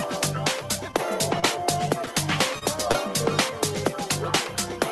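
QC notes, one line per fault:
0.91 s to 0.95 s, short stall from a late packet: the sound is held about 15 ms while the buffer waits, then resumes where it left off. Nothing is lost, only delayed.
1.40 s to 1.44 s, short concealed packet loss: about 20 ms never arrived and was filled with a synthetic continuation. The smear or wobble replaces real audio rather than holding it.
2.59 s to 2.63 s, short stall from a late packet: a longer hold of about 27 ms, with a slight buzz or dip. Everything after is pushed later.
2.91 s to 2.96 s, short concealed packet loss: about 20 ms went missing and was patched with extrapolated sound. Unlike the stalls, a brief piece of the original is gone.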